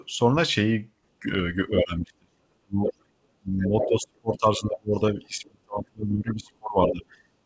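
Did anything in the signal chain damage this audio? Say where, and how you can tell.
Yes, in the call processing stage. Speech suppressed in double talk shows from 1.2 to 2.82 s, with roughly a second of it pulled down, and again from 3.37 s to the end. The level drops by as much as 35 dB or so, most likely because the echo canceller cannot separate near and far talkers and attenuates both.

The other side's voice leaking through appears at 2.86 to 2.93 s, 3.59 to 4.38 s and 6.3 to 6.93 s, only a few dB below the talker. This is likely residual loudspeaker echo that the same echo canceller failed to subtract from the microphone signal.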